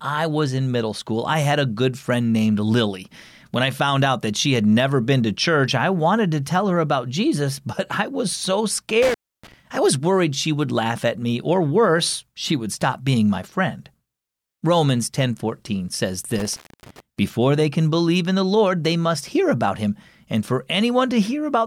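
Speech, with two dropouts caused by intermittent contact, a loose cable or plug briefly opening the signal path. The first runs from 9.02 to 9.54 s, after "but I was so" and before "I was worried she", with the line open for about 294 ms. The second runs from 16.38 to 17.00 s, ending just before "before they can believe", with about 268 ms open. Each gap has crackle at its edges and faint hiss while the connection is broken.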